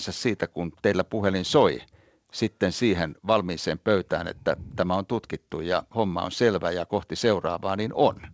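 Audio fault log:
No fault in this speech audio.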